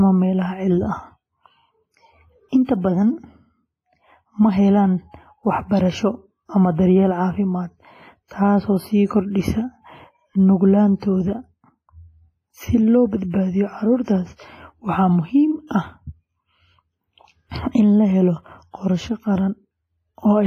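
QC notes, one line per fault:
throughout: WMA compression. The speech has a ringing, washy quality, with a hiss that rises and falls with the signal, and nothing is present above 14.6 kHz. Codec damage is heavy: quantisation noise is smeared across long transform blocks, and weaker spectral lines have been dropped. The sound is consistent with a simple first-generation Windows Media Audio encoder at a low bitrate, which is the likely cause, in the region of 24 kbps.
2.65–2.69 s and 15.67–15.71 s: pre-echo. Before each of two sharp attacks there is a brief hiss, spreading about 40 ms ahead at 2.65 s and about 35 ms at 15.67 s, and the attack itself lands softened and smeared. The onset falls late in a transform block, so noise scaled to the loud onset is spread evenly across the whole block, filling the quiet moment before the attack.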